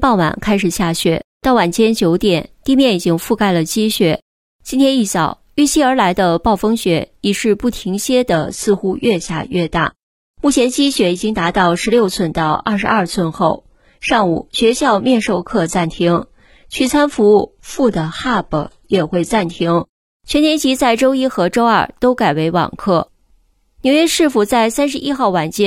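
From 8.33 s to 20.33 s the adaptive stream drops to a lower bitrate: artefacts rise abruptly, consistent with a switch from roughly 96 kbit/s to 16 kbit/s.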